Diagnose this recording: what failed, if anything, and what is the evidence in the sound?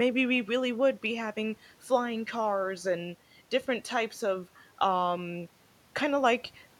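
Nothing in the signal chain audibly failed: the recording holds steady level, continuity and bandwidth across the whole clip, with no breaks, distortion or timing irregularities at any point.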